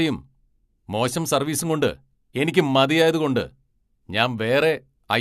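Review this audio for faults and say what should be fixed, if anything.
No technical faults can be heard in this speech recording. Nothing needs to be fixed.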